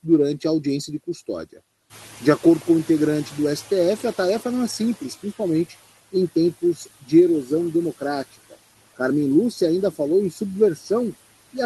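Throughout the speech, noise suppressor artifacts are present: the suppressor pulls down every band it judges to be steady noise, cutting the background by about 14 dB frame by frame. The noise therefore ducks in the pauses and swells back under the voice. The audio comes over the Opus call path, whose top end stops near 12 kHz.

From 1.9 s to 5.17 s, right after "a audiência de custódia", the noise suppressor is catching up. The room noise jumps by about 12 dB around 2 s, and the suppressor's noise estimate takes about 3.3 s to follow. During that stretch the louder background comes through with less reduction than before, then gradually sinks as the estimate settles, ending at roughly 11 dB of cut before "principalmente em".

From 6.61 s to 7.12 s, just after "principalmente em", there is speech cut by the noise suppressor. The suppressor treats part of the speech as noise and turns it down with the background, by up to about 12 dB over roughly 150 ms in total. 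Soft sounds there come out swallowed and faint. The same happens more briefly between 10.76 s and 10.9 s, where about 100 ms is dipped by up to about 8 dB, leaving it faint.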